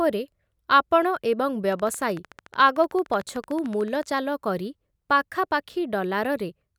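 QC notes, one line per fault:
1.73–4.04 s, train of clicks: regular ticking at 13.5 per second, around thirty pulses roughly level with the speech, likely interference or a faulty connection injecting similar pulses.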